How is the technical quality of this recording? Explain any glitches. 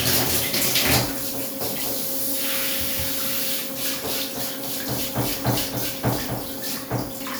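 The recording is technically sound, with no glitches or transport faults audible anywhere in the audio.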